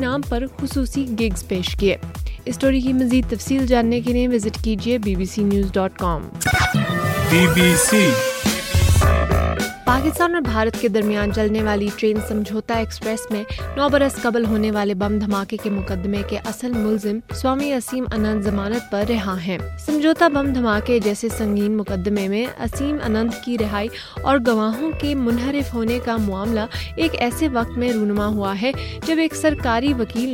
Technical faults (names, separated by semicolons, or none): none